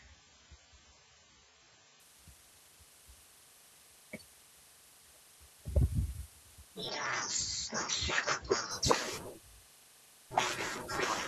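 For the first 2.0 s the speech is dull and smeary, with nothing above 7.6 kHz, which fits an adaptive stream starting at a low bitrate, around 16 kbit/s, before jumping cleanly to a much better encoding. Then from 6.89 to 8.71 s the sound goes boxy, again with nothing above 7.6 kHz and faint new background noise underneath. The level stays the same and there's no gap. That's likely the input switched to a poorer device.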